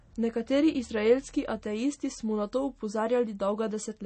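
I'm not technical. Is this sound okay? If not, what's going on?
No, not quite. From start to finish the speech sounds dull and plainly watery, with nothing above about 8.4 kHz, so the crisp top end is gone. That's most likely MP3 compression squeezed hard, cutting the treble and dropping quiet detail to save space.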